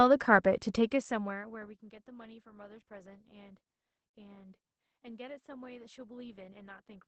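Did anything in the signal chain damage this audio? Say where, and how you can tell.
Yes. At the codec stage, Opus voice compression in SILK wideband mode cuts everything above 8.4 kHz and leaves speech audibly hoarse throughout, which fits about 12 kbps.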